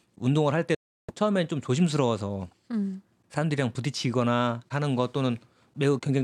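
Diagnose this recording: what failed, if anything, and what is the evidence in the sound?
Bluetooth dropout at 0.74 to 1.13 s: the speech cuts to silence for about 0.39 s, then resumes further along, as though it had kept running. The likely cause is wireless-link packets arriving too late and being discarded before playback.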